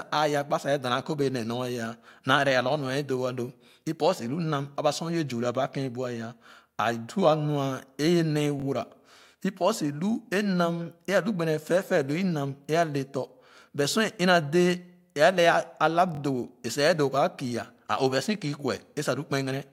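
At 8.60–8.64 s and 16.15–16.19 s, a repeated buffer plays one 21 ms slice of speech twice more, which fits a 1024-sample buffer. It is a brief buzzy stutter that shows as identical waveform blocks, with hard vertical seams on a spectrogram.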